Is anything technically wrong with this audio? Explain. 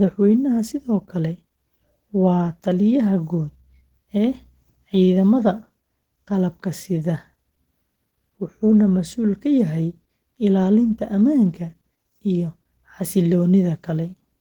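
Yes. Throughout the speech, plainly audible Opus compression makes the sound rough, grainy and hoarse, with energy reaching 20.1 kHz. The cause is likely a low bitrate near 16 kbps in hybrid mode. A speech coder handles the lows while noise-filled upper bands coarsen detail.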